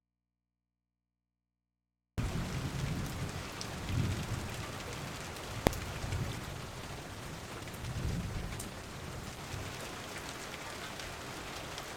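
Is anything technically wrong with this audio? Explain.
Yes, three faults are audible.

From the very start until 2.18 s there is an audio dropout to a faint residue: only mains hum remains, around 50 dB below the signal, before the sound cuts back in abruptly. The likely cause is the wanted signal being lost while the input stayed live. That abrupt return separates it from a pause or fade-in.

At 5.67 s a single loud bang marks invalid numbers at full scale. A calculation produced invalid values that were pinned to maximum output for about 0.73 ms, which fits a block of a few dozen samples. Being so short, it is one bang rather than two pops around a silence, and unlike ordinary clipping no sound shapes it.

From 6.14 s to 9.49 s a call bitrate drop takes the encoder from 128 to 18 kbps, bottoming out for 3.27 s. The coarser coding sounds rough and watery, and the highs are cut. Unlike a dropout, the sound stays present, just degraded, until quality returns.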